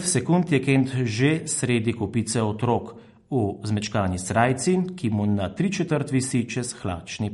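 From start to finish the speech has a watery, swirly quality with metallic chirps on s sounds, likely from MP3 compression at a starved bitrate near 48 kbps. A spectrogram shows a flat ceiling at 11.2 kHz, with weaker detail below it flickering on and off.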